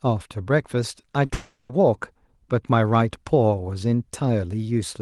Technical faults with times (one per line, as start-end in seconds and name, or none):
1.01-1.31 short concealed packet loss
1.33-1.71 long network dropout